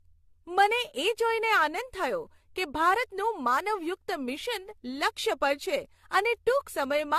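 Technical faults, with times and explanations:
Throughout, generation loss: the speech has a swirly, hollow smear with soft, blurred consonant attacks and nothing above 14 kHz, likely from around seven passes through a lossy AAC codec, probably near 64 kbit/s, each pass requantising on a new frame grid and stacking up noise.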